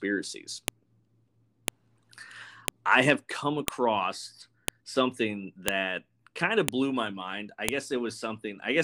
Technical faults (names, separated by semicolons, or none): file header played as audio